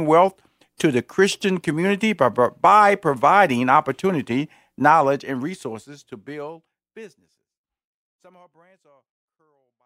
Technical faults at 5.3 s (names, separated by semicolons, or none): none